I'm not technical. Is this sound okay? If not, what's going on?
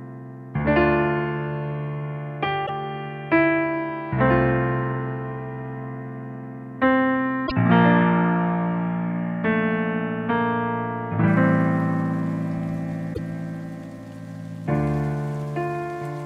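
No. Brief glitches at 2.63–2.70 s, 7.43–7.52 s and 13.13–13.18 s come from damaged data in a compressed stream: corrupted bytes make the decoder misread frames and resynchronise.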